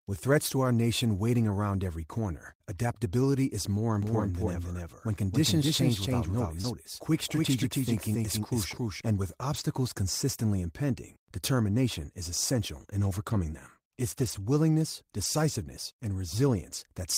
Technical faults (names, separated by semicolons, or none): doubled audio track; short concealed packet loss; lost packet rebuilt from error correction